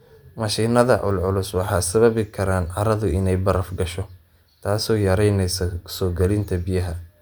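No technical faults can be heard anywhere in this recording of speech, and the signal stays intact and continuous throughout.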